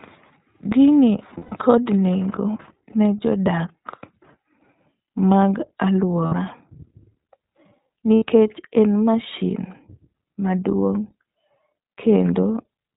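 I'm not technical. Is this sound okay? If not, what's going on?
No. The whole recording passes through the iLBC codec, a phone-quality voice compressor that drops everything above 4 kHz, so the speech sounds muffled, slightly rough and synthetic.

There are also three spots of lost iLBC frames, where pieces of the transmission went missing and the decoder filled them with a held, buzzy vowel-like sound: 1.38 to 1.54 s, just before "nengo ne"; 6.26 to 6.34 s; and 8.15 to 8.25 s, just before "en mashin". The voice recovers immediately after each one.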